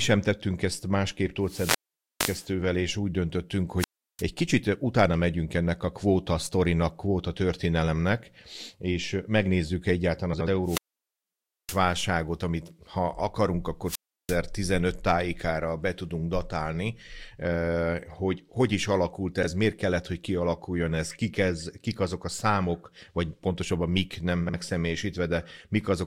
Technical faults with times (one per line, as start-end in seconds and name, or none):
1.42-2.51 wireless microphone squelch dropout
3.78-4.23 wireless microphone squelch dropout
10.33-10.48 frames out of order
10.63-11.81 wireless microphone squelch dropout
13.85-14.39 wireless microphone squelch dropout
19.42-19.47 frames out of order
24.46-24.54 frames out of order